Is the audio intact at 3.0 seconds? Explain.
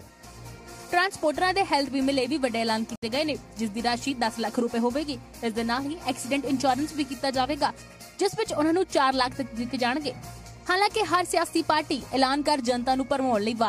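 No: a digital broadcast dropout mutes the sound from 2.96 to 3.03 s, a 64 ms hole consistent with two lost frames, entered by a 3 ms fade rather than a click.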